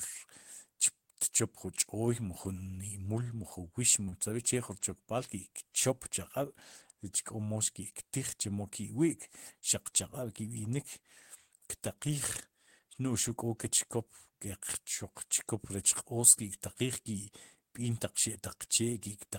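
A speech recording with two back-to-back network faults near 4.1 s. From 4.05 to 4.09 s there is short concealed packet loss: about 20 ms never arrived, so the receiver extrapolated the preceding sound and left a brief smear. Immediately after, from 4.09 to 4.14 s, a short stall from a late packet holds the sound for about 33 ms while the jitter buffer waits. Nothing further is lost, but playback then runs 33 ms later.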